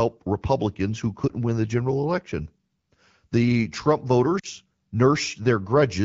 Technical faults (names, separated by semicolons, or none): lost AMR speech frames